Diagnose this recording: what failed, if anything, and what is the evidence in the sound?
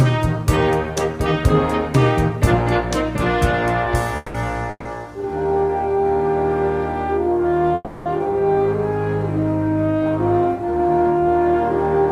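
Three call audio freezes interrupt the sound: 4.16–4.37 s, 4.70–4.88 s and 7.75–8.09 s. Each time the last sound is drawn out as a fading buzz or hiss for 180, 150 and 310 ms, with brief silence after the second and third, then the audio resumes exactly where it stopped, so nothing is lost. This is likely a network stage fault: late packets drained the jitter buffer, concealment filled the wait, and each gap added delay equal to its fill time. A spectrogram would show smeared, decaying horizontal bands, and the waveform a fading, repetitive stretch.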